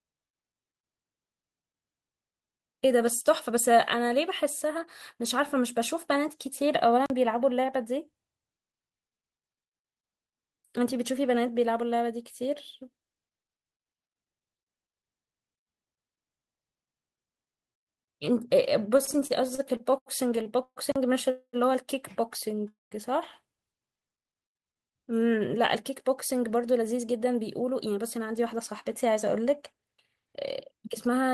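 At 7.06 to 7.10 s a block of digital silence cuts in: 40 ms of silence with no fade, so the speech snaps off and back. The hard digital edges set it apart from the smoothed-over gaps that come later.

From 18.97 to 20.79 s there are repeated stalls (stutter): the jitter buffer runs dry 15 times, and the receiver stretches out the last sound to cover 408 ms in all, with the longest wait 129 ms. About 22% of that stretch is filler, so the speech drags and hiccups but loses nothing. A second block of digital silence follows at 20.92 to 20.96 s, again 40 ms of silence with the same sharp edges.

Two call audio freezes follow, at 21.30 to 21.56 s and 22.68 to 22.94 s. Each time, the sound hangs as a fading continuation of the last moment and then falls to silence, for about 70 ms in the first and 170 ms in the second, before resuming where it left off. The likely cause is packets held up in transit, which adds 231 ms of delay each time. 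Unlike the stutter, each of these is one longer hold that decays, not many brief catches.

A jitter buffer slow-down runs from 23.80 to 24.17 s. Repeated pitch periods add 46 ms, so the speech plays at about 90% speed at unchanged pitch, sounding drawn out rather than broken.

A jitter buffer speed-up spans 25.75 to 30.34 s, and another runs from 30.74 to 31.33 s. Both play at about 108% speed by cutting out short pitch-period slices, roughly 0.4 s in the first and a few tens of milliseconds in the second. The pitch holds while the speech sounds hurried, the opposite of the earlier drag.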